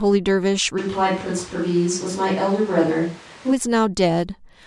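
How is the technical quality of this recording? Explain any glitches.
The recording has one glitch. From 0.80 s to 3.51 s the sound turns roomy and hollow, with thinner bass and background noise rising to roughly 25 dB below the speech, though loudness stays about the same. This is likely a switch to a distant microphone: the close microphone's signal dropped out and a farther one took over. On a spectrogram, low frequencies fade and a steady noise floor fills the gaps between syllables, with abrupt edges at both transitions.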